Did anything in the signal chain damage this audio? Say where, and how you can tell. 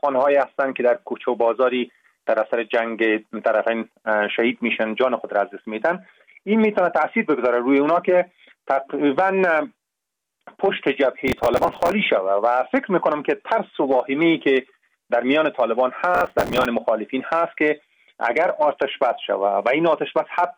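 Yes. The damage is in the driver and buffer stage: processor overload crackle, from 11.28 to 11.92 s and again from 16.15 to 16.66 s. In each burst the processor missed dozens of buffer deadlines. The buffers were only a few milliseconds long, so each miss replayed stale audio with hard edges. Strung together, these splices form a gritty, tearing crackle over the sound that stops cleanly once the load eases.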